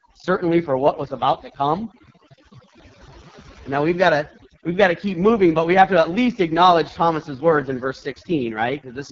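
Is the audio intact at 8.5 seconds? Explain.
No. At 8.5 seconds, as across the whole clip, two faults are present.

Overdone noise removal: a noise reduction stage was set far too aggressively, so every frequency band close to its noise estimate is pushed right down or switched off, and the quieter parts of the speech are cut along with the noise. Around 8.5 seconds the background drops and breaks up into twinkling specks.

AMR wideband (HD Voice) codec: the speech has passed through AMR-WB at a very low rate, which fits its 6.6 kbit/s mode, the lowest it offers. The codec rebuilds the voice from a pulse-excited vocal tract model and fakes the top band with shaped noise, and at this rate the damage is heavy. Nothing sounds above 7.5 kHz, and the voice at 8.5 seconds is rough and raspy.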